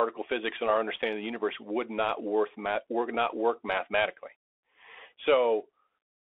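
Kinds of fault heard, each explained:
Bluetooth CVSD headset codec: The speech is squeezed into a phone-line band of roughly 300 Hz to 3.5 kHz and coded one bit per sample, which fits a 64 kbps CVSD link. You can plainly hear it: grainy hiss underneath, scratchy sibilants, and louder bright sounds smearing as the step size lags.
unconcealed Bluetooth headset packet loss: Around 1.02 s, between "physics and our" and "of the universe would", there's a hole of about 7.5 ms with hard edges, which points to a couple of headset packets dropped and filled with nothing.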